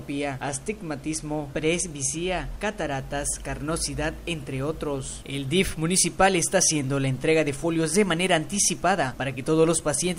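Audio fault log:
0.48–2.92 s channel delay (comb filtering): one channel lags roughly one sample, so the mono sum cancels near 20 kHz, dulling the extreme top.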